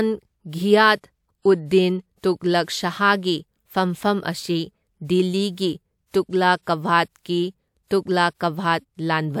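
A short hiss creeps in just ahead of a sharp attack in this speech clip, running from about 6.62 to 6.67 s, about 51 ms, and the attack itself comes out softened and smeared. This is pre-echo: the transform codec spread quantisation noise across a whole block, so noise sized for the loud onset also filled the quiet stretch before it.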